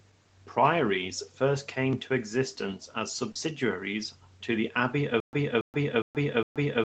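Short concealed packet loss at 3.31 to 3.37 s: about 40 ms of the speech arrived too late for the decoder, so the receiver extended the preceding sound to bridge the hole and then crossfaded back, leaving a brief smear or wobble in the voice.

Stutter with silent gaps from 5.20 s to the end: a 280 ms fragment plays, then about 130 ms of digital silence, repeating every 410 ms for four rounds. This points to the stream likely stalling and replaying its last buffer on each retry, so the intended speech never plays.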